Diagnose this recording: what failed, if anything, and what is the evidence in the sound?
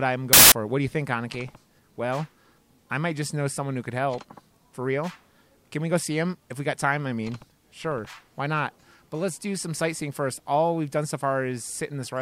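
The sample-format conversion stage failed: from 0.33 to 0.52 s the audio turns into loud, harsh broadband noise, the signature of samples built from the wrong bytes. Misassembled bytes make each value's fast-changing low bits dominant.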